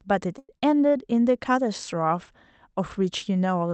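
At 0.38 s the speech stalls until 0.50 s, a call audio freeze. Packets were likely held up, emptying the jitter buffer. The last sound stretches into a fading buzz or hiss, then about 40 ms of silence. Nothing is lost, but everything after arrives about 100 ms late.

From 0.58 to 0.63 s comes a short concealed packet loss. About 30 ms of audio never reached the decoder. The receiver extends the preceding sound for roughly 40 ms and blends back. It is heard as a brief smear or wobble.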